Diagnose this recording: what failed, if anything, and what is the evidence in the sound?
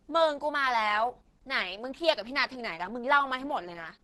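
The codec stage is where this went wrong. Across the whole clip the speech has that muffled, hoarse, grainy quality of heavy low-rate compression, and it sounds like Opus compression is the likely culprit, running in its hybrid speech mode at a rate that points to something around 12 kbps. The top end stops at 19.5 kHz, but the damage lives lower down: the encoder is starved of bits, so band detail gets filled in roughly rather than kept.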